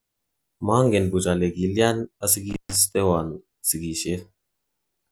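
At 2.50 s the speech breaks up with an intermittent contact fault lasting until 2.76 s. A loose plug or cable conductor lifts for a moment, so the signal path opens for about 135 ms. The sound drops out abruptly, bracketed by scratchy crackle as the contact makes and breaks, with faint hiss in the gap. That crackle and residual hiss set it apart from a clean digital dropout, which falls to silence without noisy edges.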